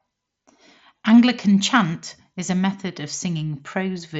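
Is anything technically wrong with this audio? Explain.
No, nothing technically wrong is audible in this speech.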